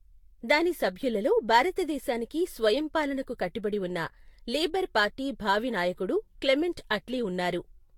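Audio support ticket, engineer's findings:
Generation loss, throughout. Speech sounds swirly, smeared and hollow, more than a single encode would cause; consonant attacks blurred, top band empty above 19.4 kHz. Likely repeated lossy re-encoding, about four passes, consistent with Vorbis near 70 kbit/s. Each decode and re-encode quantises again on a shifted frame grid, so noise and spectral holes stack.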